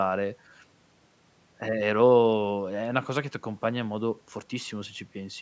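No technical faults can be heard in the speech. It has passed through call microphone processing, which leaves nothing above 8 kHz and trims the lowest bass, as expected for that path.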